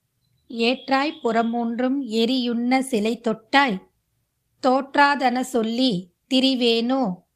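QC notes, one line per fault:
No faults heard anywhere in this speech recording.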